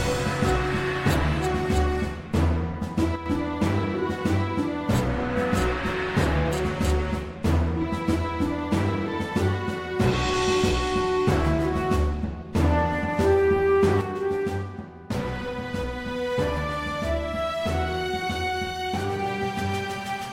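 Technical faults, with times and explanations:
3.16–3.26 s and 14.01 s to the end, one channel drops out: the level dips abruptly by about 6 dB, likely because one stereo channel goes silent before the mono sum.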